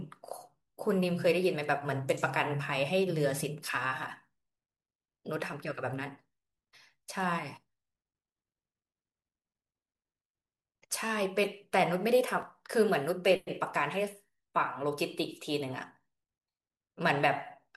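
A speech clip with one fault: at 12.42 s the sound jumps forward by a few milliseconds. This is likely a dropped buffer (overrun). The waveform shows an abrupt discontinuity with no gap, and the spectrogram shows a thin vertical broadband line.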